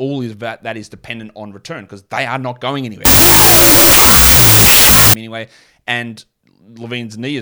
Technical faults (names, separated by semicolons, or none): wrong sample width